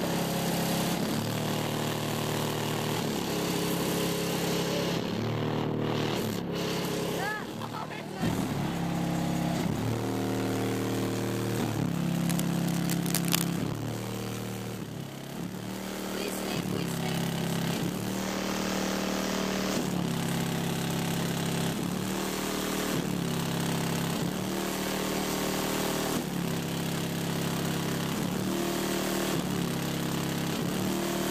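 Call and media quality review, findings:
Cable scratch noise, 12.14 to 13.49 s. Symptom: dense, irregular scratching and rustling laid over the sound for about 1.3 s, roughly as loud as the programme itself, only a few dB under it. Probable component: a worn cable, connector or control being moved. Mechanism: contact resistance fluctuating rapidly as the joint shifts, injecting uneven bursts of broadband noise into the signal path until the contact settles.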